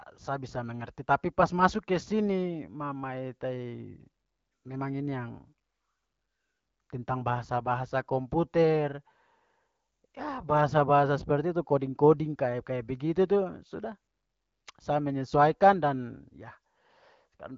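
No technical faults are audible.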